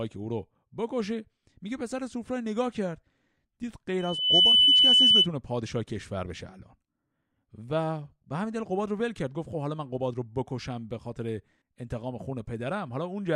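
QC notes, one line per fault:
3.99–5.28 s, loudspeaker feedback squeal: a pure tone around 3 kHz swells up out of the speech in roughly 0.4 seconds and then sits on top of everything, something like 15 dB louder than the talking, until it stops. That's the mic hearing its own loudspeaker, with loop gain tipping past one at 3 kHz, so that single frequency keeps feeding itself and runs away into a squeal.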